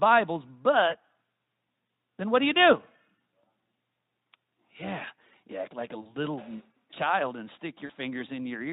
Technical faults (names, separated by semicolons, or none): VoIP packet loss concealed by the speech codec